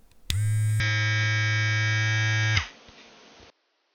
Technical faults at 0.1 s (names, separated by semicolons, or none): none